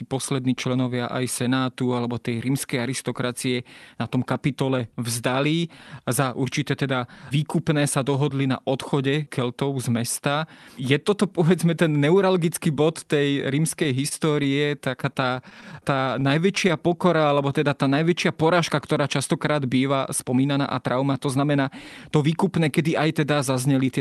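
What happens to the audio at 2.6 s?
Nothing goes wrong at 2.6 s: the speech passes through the call path intact, with no dropout, glitch or distortion at that moment.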